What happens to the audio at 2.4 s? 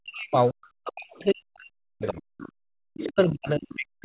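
Right around there, from 2.38 to 2.52 s, you get a short bit of the other side's voice leaking through. It's a faint second voice, roughly 20 dB under the main speech, sitting inside the narrowband G.711-style sound that already tops out near 4 kHz. The likely cause is the far end playing out of the talker's loudspeaker into the mic, with the echo canceller not catching all of it.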